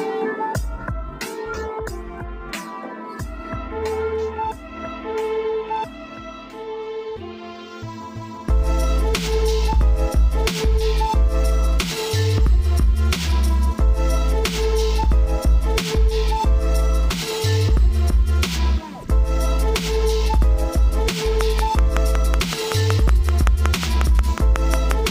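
From 21.41 to 24.92 s a train of clicks ticks steadily over the sound, about 5.4 per second at regular spacing, some twenty in all, likely from interference. Each shows as a thin vertical line across the spectrogram and a sharp spike standing well above the waveform.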